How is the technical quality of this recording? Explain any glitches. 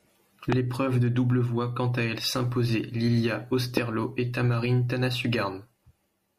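The speech carries two loud pops. A sudden voltage pulse, likely from a switch, static or a driver glitch, entered the signal at 0.52 to 0.55 s, just before "de double voit quant", and again at 3.77 to 3.79 s. Each time, a single sharp crack stands roughly 15 dB above the speech, which carries on underneath.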